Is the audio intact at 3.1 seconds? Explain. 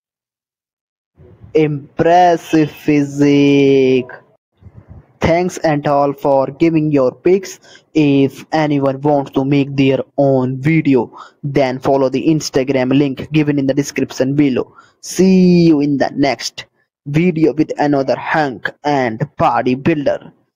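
No. Gain pumping runs through the whole clip, so it is present at 3.1 seconds too. The level swings by about 10 dB. Loud and soft parts sit unnaturally close together, and the sound feels squashed. The likely cause is input gain set far too high, with a fast limiter or compressor clamping down on every peak.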